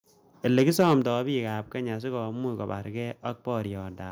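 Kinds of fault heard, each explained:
Microphone overload: The input gain was likely set so high that the loudest peaks drove the converter past its ceiling, by about 4 dB, so their tops were sheared flat. From 0.57 to 0.94 s a few percent of the samples sit clipped at the converter's limit, and the speech takes on a harsh, crackling, buzzy edge on its strongest syllables, ending just before the words "bik ab kenya sikomuch".
Microphone volume stepped down: The call software likely reacted to that overload by cutting the microphone's input level in a single step of about 6 dB. At 1.02 s, right after the distorted stretch, both the speech and the background noise drop abruptly to a quieter level. This is a clean, sudden change rather than a smooth fade, and it arrives just before "bik ab kenya sikomuch".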